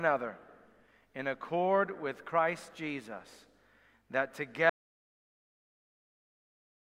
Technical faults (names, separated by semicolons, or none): audio dropout to silence